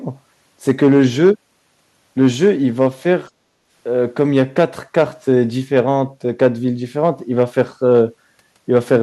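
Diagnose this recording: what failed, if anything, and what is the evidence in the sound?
Hard clipping on the loud speech peaks at a gain or converter stage, at 0.69–1.30, 2.21–3.13, 4.20–5.34, 5.75–5.91, 6.42–6.47, 7.04–8.01 and 8.76–8.96 s. Overdriven by about 2 to 4 dB, the waveform tops are flattened, adding high harmonics heard as crackly fuzz.

Call processing: the background was gated by the echo canceller from 3.3 to 3.7 s. While it judged loudspeaker echo present, it pulled the microphone path down by about 14 dB, so the room sound drops for close to half a second, then returns on release.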